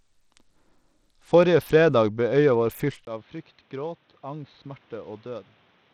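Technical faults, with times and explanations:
Throughout: Bluetooth SBC compression, plainly audible across the speech. The treble flickers and thins, with a gritty, aliased haze riding on the sound. The coarse sub-band quantisation fits a low bit pool, likely around 80 kbps, that starves the upper bands.
3.05 s to the end: input switched to a poorer device, with a 20 ms gap at the switch. Afterwards nothing reaches above 4.3 kHz, the speech turns dull and boxy and drops roughly 10 dB, and a new background noise appears well below it. This likely reflects a narrower-band microphone or headset profile.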